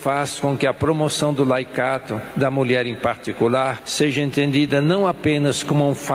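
Gain pumping runs through the whole clip, likely from gain set far too high with a fast limiter, so the gain swings by about 10 dB, pulled down on each loud sound. On a waveform this shows as a flattened envelope with the noise floor visibly rising in the gaps, and on a spectrogram as background energy brightening and dimming in step with each loud burst.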